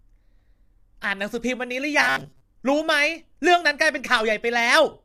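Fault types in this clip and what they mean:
Low-delay AAC compression: The speech is rough and grainy throughout. This is likely AAC-ELD coding, and the damage fits a bitrate near 32 kbps.
Robotic sound from repeated short buffers: From 1.99 to 2.40 s the speech becomes a rigid, metallic 134 Hz buzz, likely from a repeated 7.5 ms buffer.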